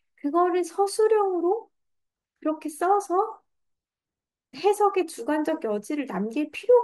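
Nothing in this speech recording stands out as a technical fault, so there's no glitch, dropout or distortion to point to at any moment.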